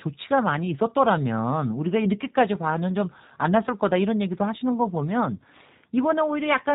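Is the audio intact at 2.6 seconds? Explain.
No. At 2.6 s, as throughout, G.729 coding rebuilds the speech from a vocal-tract model with sparse pulses, leaving it rough and synthetic with nothing above 4 kHz. That buzzy model-built timbre, fitting 8 kbit/s, separates it from a plain low-pass filter.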